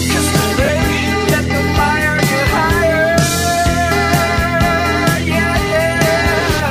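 From 0.65 to 0.69 s, lost LE Audio frames (about 40 ms, fitting four 10 ms frames) make the decoder repeat the last spectrum with randomised signs, briefly smearing the sound into noise.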